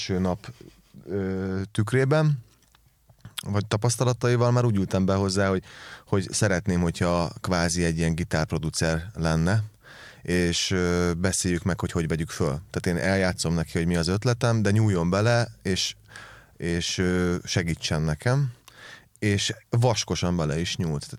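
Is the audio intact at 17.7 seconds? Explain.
Yes, the speech at 17.7 seconds plays through cleanly, with no dropout, glitch or other fault at that point.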